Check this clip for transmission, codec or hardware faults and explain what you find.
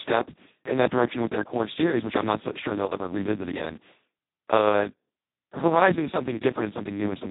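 The speech carries heavy Speex codec damage from start to finish. At this quality Speex has almost no bits left to describe the excitation signal, so the coder falls back on something close to a vocoder. The result is hoarse, buzzy and robotic, which points to the lowest Speex mode at roughly 2 kbps. Nothing above 3.8 kHz survives. A spectrogram shows a hard ceiling there and smeared, noisy harmonics below it. The waveform looks rough and poorly defined.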